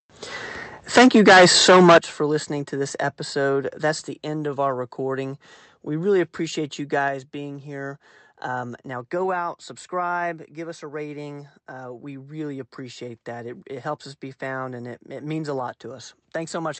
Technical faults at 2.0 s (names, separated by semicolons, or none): microphone overload; microphone volume stepped down